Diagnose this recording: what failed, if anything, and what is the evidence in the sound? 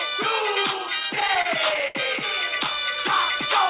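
Repeated stalls (stutter) between 1.0 and 1.97 s, at the network and jitter-buffer stage: late packets drained the buffer repeatedly, so the receiver stretched the last sound through each gap, the longest 73 ms, about a fifth of that span. The band-limited G.711 path, nothing above 4 kHz, carries the drag.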